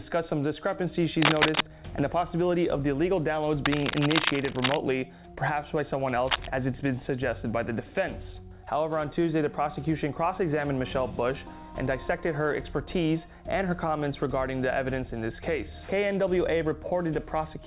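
Bursts of scratchy, rustling noise sit over the sound from 1.22 to 1.64 s, 3.65 to 4.76 s, and 6.27 to 6.48 s. The first rises about 5 dB above the sound itself, and the other two reach roughly its level. This is cable scratch noise, likely from a worn connector whose contact resistance flickers as it moves. The band-limited call audio stops near 4 kHz.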